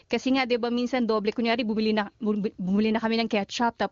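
No technical faults are audible in this speech: it passes through the AMR wideband (HD Voice) codec with at most faint coding damage, a quality that fits the codec's top rate of 23.85 kbit/s, and the band stops at 7.1 kHz, as expected for that path.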